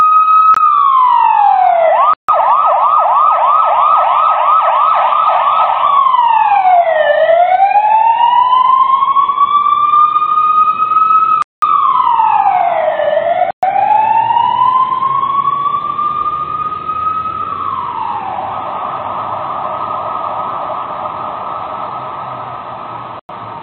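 A gain stage set too high, likely held back by a fast limiter or compressor, causes gain pumping across the whole clip. The level is pulled down on each loud sound and recovers afterwards, swinging by around 10 dB and squashing the dynamics.

The sound also cuts to silence five times, likely from a Bluetooth stall: interference delayed packets, the headphones' buffer emptied, and playback paused until resent data arrived. The gaps fall at 0.54–0.57 s, 2.14–2.29 s, 11.42–11.62 s, 13.51–13.63 s and 23.19–23.29 s, lasting 22 to 201 ms.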